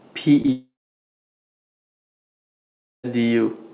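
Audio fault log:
0.42–0.46 s and 0.46–0.50 s, short concealed packet loss: Two back-to-back gaps, each about 20 ms of the stream arriving too late for the decoder, were patched by the receiver extending the preceding sound from its own pitch or as shaped noise, then blending back into real audio. Across this stretch the sound smears and wobbles briefly rather than cutting out, and any short consonant here may simply be missing.
0.52–3.05 s, long network dropout: Audio stopped arriving for about 2.5 s, likely a network dropout. The receiver first carried the last sound onward as a fading buzz or hiss, but within a few tenths of a second that gives way to roughly 2.3 s of near-silence, with no content. When sound resumes at 3.05 s it jumps ahead, and everything in between is gone. Through the narrowband call path nothing sits above 4 kHz, which fits G.711 mu-law at 64 kbps.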